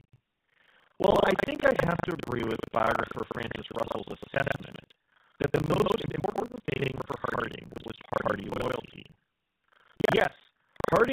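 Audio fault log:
Throughout: GSM full-rate codec. The speech has a buzzy, gravelly roughness and nothing above 4 kHz, which fits the 13 kbps first-generation GSM coder. That coder models the vocal tract and drives it with a sparse, regularly spaced pulse excitation, so the fine texture of the voice is replaced by a coarse grain. Unlike a plain low-pass or band-limited line, the damage here is a rasp in the voice itself, not only dullness.
Throughout: buffer tearing. A steady robotic rattle at about 25 Hz sits on the sound and stops whenever the signal stops. The writer and reader of the playback ring buffer have drifted into each other, so roughly half of each period replays audio from about a tenth of a second earlier, with hard joins on both sides. It differs from codec roughness in its fixed, mechanical repetition rate, and from dropouts in that nothing goes silent.
1.1–1.19 s and 8.46–8.54 s: lost GSM frames. 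At these two points the voice briefly freezes into a rough, metallic ring instead of moving on. Bad frames were replaced by repeating the last good frame's settings. One frame was lost at the first point and two at the second, about 20 and 40 ms of audio. Both are short enough to hold the sound rather than fade it to silence, which sets them apart from ordinary dropouts or clicks.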